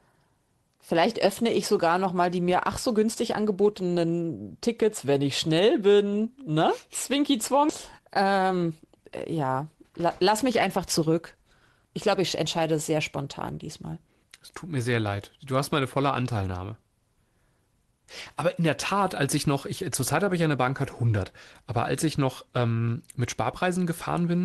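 At 7.69 s the receiver abandoned a stretch of speech, around 0.7 s of it, either lost in transit or discarded by an overflowing jitter buffer, while later audio was already queued. This is a skip ahead. Playback jumps forward with no gap at all, so the talk on either side of the missing piece is butted directly together, and part of what was said simply vanishes mid-flow.

From 7.99 s to 9.34 s comes a jitter buffer speed-up. The buffer was holding more audio than its target, so the receiver trimmed out short pitch-period-sized pieces again and again to bring the delay down, removing roughly 150 ms in total. The speech runs at about 109% speed with its pitch unchanged, which is fast enough to sound hurried. Across the clip the Opus call path's coding leaves the sound band-limited at about 12 kHz, which points to a low call bitrate around 20 kbps.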